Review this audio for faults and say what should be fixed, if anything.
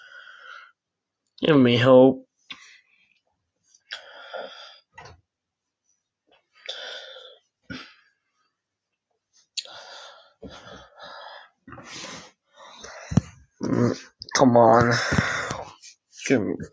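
Nothing here needs fixing; the sound has simply been through a call's microphone processing, which rolls off the deepest bass and leaves nothing above 8 kHz, and that's just how such a path behaves.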